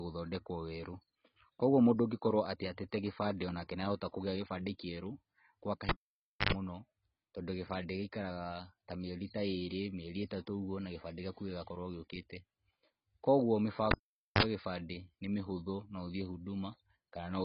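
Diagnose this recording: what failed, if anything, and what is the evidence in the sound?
The codec stage likely ran AAC at a low bitrate, around 16 kbps. The speech is dull and smeared throughout, with nothing above 5.6 kHz.

A cable was pulled and plugged in twice at the analogue wiring, at 5.89–6.53 s and 13.91–14.43 s. Each time there is a pop, near silence of 0.59 s and 0.47 s with 95 ms and 42 ms of 50 Hz buzz, then another pop as the sound returns.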